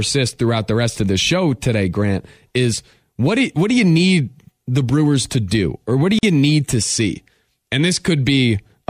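At 6.19 s, between "do or what do" and "you need to see", the speech breaks off for about 43 ms and then resumes at 6.23 s. This is a gap at a join of encoded pieces: two separately encoded segments were spliced without trimming the encoder's start-up delay and last-frame padding, leaving that silence in place. Unlike a dropout, nothing is lost, since the speech picks up exactly where it broke off, and the softened edges show the codec smoothing the cut.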